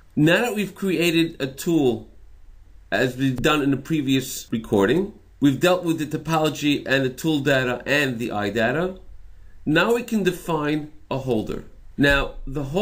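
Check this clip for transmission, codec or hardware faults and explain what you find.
I found no faults in this clip.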